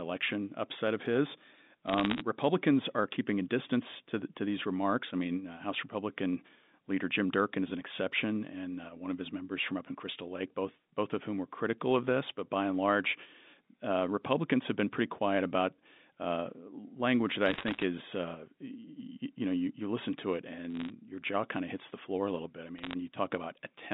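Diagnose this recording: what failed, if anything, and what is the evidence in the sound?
Bit errors on a digital phone line, in the transmission path. Short bursts of sharp ticks crackle over the speech at 1.86–2.22, 17.46–17.84 (after "about uh language that"), 20.75–20.90 and 22.78–22.94 s. Each flipped bit corrupts one A-law sample, and sign or high-bit hits snap the waveform into a click.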